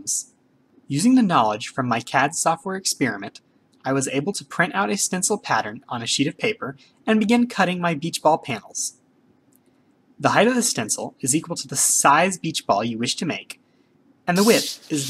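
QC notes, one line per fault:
Nothing stood out on a careful listen.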